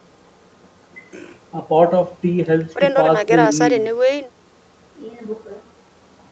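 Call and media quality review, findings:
Nothing stood out on listening to this speech clip through the call microphone processing and the Opus call path.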